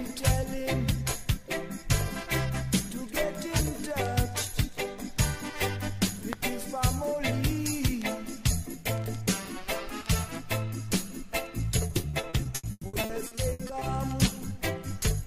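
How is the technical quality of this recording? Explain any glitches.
One stretch near the end is damaged. From 11.87 to 13.83 s there is repeated packet loss with a robotic sound: a rapid series of short holes, the longest about 120 ms, each patched by stretching the preceding sound, so about a third of that span is filled-in audio. The result is choppy and robotic. Unlike a single dropout, the gaps recur in quick succession, and unlike codec smearing, pieces of the sound are actually missing.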